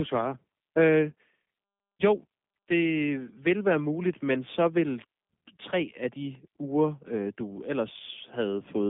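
Speech, with G.729 codec damage running through the whole clip. Nothing passes below 200 Hz or above 3.6 kHz. The voice sounds rough and plainly synthetic. That fits an 8 kbit/s coder rebuilding each short frame from a vocal tract filter, a pitch predictor and a few pulses.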